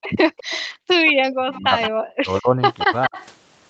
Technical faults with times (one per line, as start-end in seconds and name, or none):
0.01-0.66 echo leak
0.68-0.89 background gated by the echo canceller
1.06-1.90 echo leak
1.46-3.17 speech suppressed in double talk
2.78-3.26 echo leak